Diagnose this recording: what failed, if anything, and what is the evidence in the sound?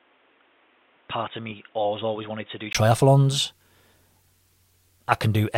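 From the start to 2.75 s the speech has nothing above 3.8 kHz, sits about 10 dB lower, and carries a separate noise floor. A 20 ms gap then precedes full-band sound, likely an input switched to a poorer device at the driver stage, not a codec bandwidth drop.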